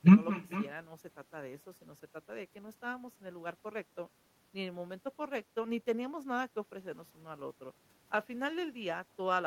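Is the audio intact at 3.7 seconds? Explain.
No. At 3.7 seconds, as across the whole clip, there is echo with no canceller. The far end is playing the call through a loudspeaker, its microphone picks that playback up, and nothing subtracts it before it is sent back. The speech therefore returns after roughly 400 ms of round trip, about 17 dB below the direct voice, trailing every phrase as a fainter, thinner copy.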